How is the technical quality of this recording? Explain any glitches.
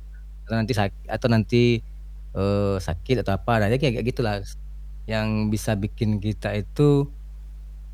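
The recording is compromised by mains hum running through the whole speech clip. A steady 50 Hz tone with some low harmonics sits under the speech, fairly prominent at roughly 15 dB below it, consistent with a ground loop or a nearby transformer coupling the power line into the signal path.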